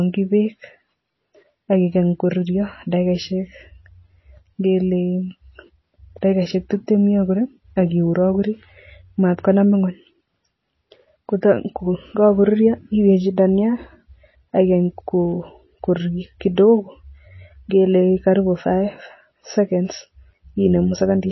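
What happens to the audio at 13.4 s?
At 13.4 s, as throughout, there is likely MP3 compression: the encoder drops weak frequency lines and everything above 5.8 kHz, so speech sounds plainly watery or swirly.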